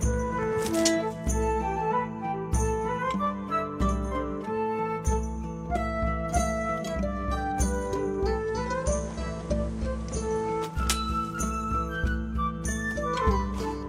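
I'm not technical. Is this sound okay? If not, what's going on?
No. Digital radio blending to analogue, from 8.34 to 10.84 s: the radio lost its digital signal and faded over about a quarter of a second to the station's FM broadcast. Faint hiss appears, and it gets slightly quieter.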